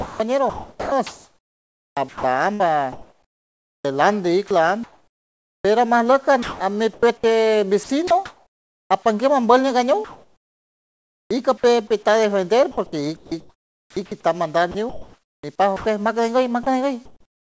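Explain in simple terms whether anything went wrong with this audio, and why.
From the start to about 8.9 s the sound is chopped by the voice detector: quiet bits keep getting swapped for fake hiss, likely because the sender's detector kept switching on and off. From 12.71 s to the end, the same choppy flicker returns.

After "apanguer ambield", from 10.04 to 11.63 s, there's comfort noise in place of the background. The real room sound gives way to a flat, featureless hiss, likely because the sender stopped transmitting during the pause.

At the tail of that stretch, 11.57 to 11.63 s, a bit of sound is dropped by the voice detector. A tiny piece of speech turns into hiss, likely mistaken for background.

The call link itself carries nothing above 8 kHz, so the sound is a bit dull up top.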